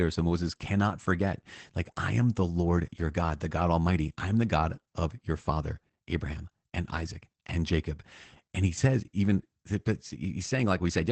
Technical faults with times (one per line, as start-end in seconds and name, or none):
0.00-11.12 Opus voice compression